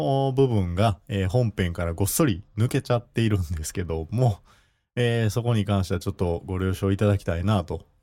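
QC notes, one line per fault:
No technical faults can be heard in the signal at any point.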